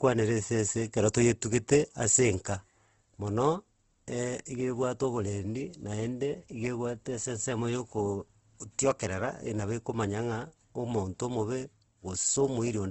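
Throughout, the speech is rough and grainy with nothing above 8 kHz, likely Opus compression at a rate that fits about 16 kbps; noise-filled bands, not MP3-style swirling.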